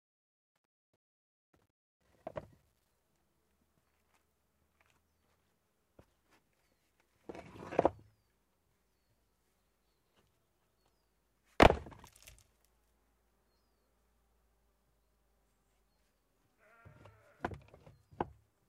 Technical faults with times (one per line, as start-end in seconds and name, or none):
0.00-2.91 truncation distortion on a fade